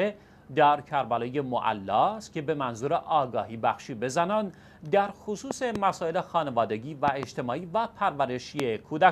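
Loud pops break through the sound three times. A double pop falls between 5.51 and 5.78 s, another pair between 7.08 and 7.25 s, and a single, sharper pop at 8.60 to 8.62 s. The last is the loudest, standing well clear of the surrounding level. Each is likely a voltage step or pulse from a switch, plug or static discharge. It lands as a hard thump over sound that continues underneath. On the waveform they show as tall isolated spikes, and on a spectrogram as thin vertical broadband stripes.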